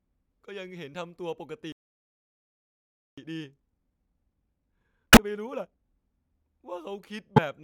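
At 1.72 s the speech stops dead and silence holds until 3.18 s, about 1.45 s. This is a playback stall. The player likely ran out of buffered data or had its thread blocked. The speech then resumes where it broke off.

From 3.18 s to 5.86 s comes a time-compressed catch-up. The player clears its backlog by cutting small slices and cross-fading the joins. Speech runs at 1.5 times normal speed. Pitch stays unchanged.

Inside that hurried stretch, from 5.13 s to 5.19 s, damaged data in a compressed stream produces a brief glitch. The decoder misreads corrupt frames, loses sync and hunts for the next header. The same fault recurs from 7.33 s to 7.39 s as another short blip.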